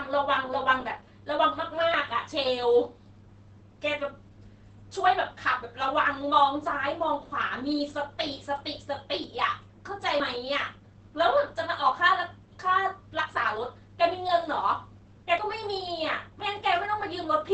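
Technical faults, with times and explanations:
Throughout: Opus compression. The speech is muffled and hoarse, with nothing above about 8.6 kHz. This is likely the codec running its low-rate speech mode, which trims bandwidth and roughens tone in a way that fits roughly 16 kbps.
9.24 s: dropped buffer (overrun). An abrupt jump forward in the speech with no gap of silence. A short stretch, about 20 ms, was likely overwritten before it was read, so the surrounding audio is spliced directly together.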